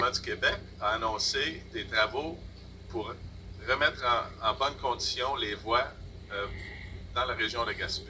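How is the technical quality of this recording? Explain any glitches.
One brief glitch stands out over audio that has come through a G.722 call path, with nothing above 8 kHz.

At 1.08 s there is a block of digital silence about 2.2 ms long. The output buffer likely wasn't filled in time, so the samples were zeroed with no fade. It sounds like a sharp tick. A waveform shows a flat line with abrupt edges, and a spectrogram shows a thin vertical broadband stripe.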